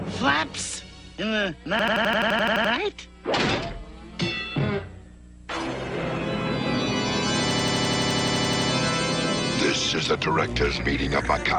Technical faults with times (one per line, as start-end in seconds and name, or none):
1.79-2.73 system hang loop
7.51-8.70 system hang loop